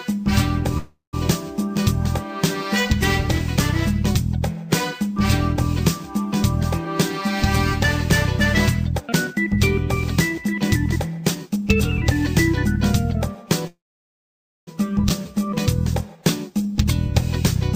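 The audio has two call audio freezes, at 0.77 to 1.15 s and 13.67 to 14.69 s. Each lasts about 0.36 s and 1 s, ending in roughly 0.15 s and 0.91 s of silence. The likely cause is delayed packets emptying the jitter buffer. Playback then resumes where it stopped, losing nothing. A jitter buffer speed-up runs at 6.85 to 7.27 s (110%), 9.00 to 9.57 s (134%) and 10.36 to 11.57 s (108%), trimming roughly 50, 200 and 100 ms of pitch periods. The sound is hurried but keeps its pitch. A skip ahead at 15.09 to 15.12 s drops around half a second outright, unlike a freeze, which inserts a gap instead of losing material. Then a jitter buffer slow-down at 15.22 to 16.74 s repeats pitch periods to add 96 ms, giving 94% speed at the same pitch, the mirror of the speed-up.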